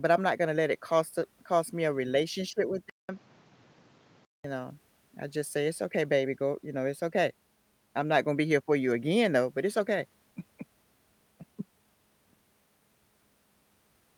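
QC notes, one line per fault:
2.90–4.44 s input switched to a poorer device: capture likely changed microphones, leaving a 0.19 s gap, then duller speech cut above 7.6 kHz with faint new noise, level unchanged.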